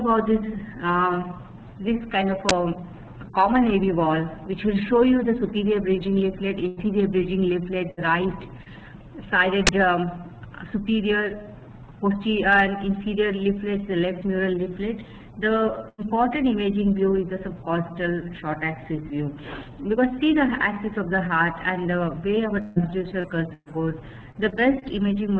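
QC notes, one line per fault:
2.49 s and 9.67 s, uninitialised buffer: each is a single 20 ms block of harsh, loud digital noise that jumps out of the surrounding audio. Something handed a buffer to playback before any real samples had been written into it, so whatever leftover values were sitting in memory got played as sound. Because that junk has no relation to the actual signal, it lands as an abrupt, loud crack.
6.68–6.80 s, 7.91–8.00 s and 15.89–16.01 s, burst of packet loss: three holes of about 90, 60 and 90 ms where a run of packets didn't arrive in time. The receiver kept the last bit of sound going and faded it down across the gap, so you hear a held, dimming tail instead of real content. When audio comes back it has skipped ahead, and the stretch in between is simply gone.
8.63–8.69 s, short concealed packet loss: only about 30 ms went missing here, and the receiver papered over it by extending the preceding sound for a moment, then crossfading back into the real signal. 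Because the patch is so short, it comes across as a quick smear or slight wobble rather than an obvious gap.
22.61–24.84 s, repeated packet loss (robotic sound): over these roughly two and a quarter seconds, six separate gaps hit one after another, the longest about 147 ms and together about 390 ms of missing audio. Each gap gets patched by stretching the last sound, and the next one arrives before things settle, so the passage turns choppy, with chunks missing. All of this rides on the G.722 call path, which keeps nothing above 8 kHz, consistent with 64 kbps G.722.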